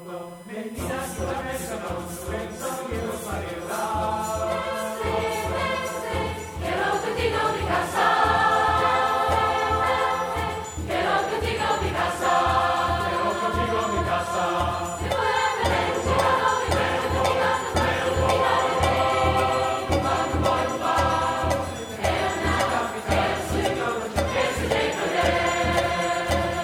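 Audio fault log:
Throughout: USB whine. Current drawn by the USB bus in its regular 1 ms frames is leaking into the audio path through the shared power or ground, superimposing a steady, fixed-pitch tone at 1 kHz, the frame rate itself and the strongest component. It sits roughly 30 dB below the program material, quiet but present throughout, so it stands out most clearly in pauses and low-level passages as a thin electronic whistle that never changes pitch.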